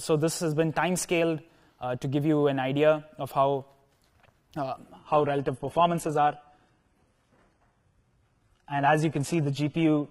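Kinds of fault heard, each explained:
Adaptive stream at a lower bitrate: from 4.98 s the stream switches versions without a gap, leaving no content above 11.8 kHz and synthetic, smeared treble, unlike a dropout.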